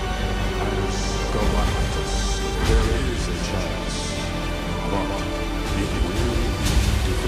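From start to finish, every sound is followed about 150 ms later by a second, roughly 5 dB quieter copy, a doubled audio track likely caused by a slower capture path. The waveform shows each onset repeated, and the spectrogram shows ghost events stacked at a fixed offset, with no decay.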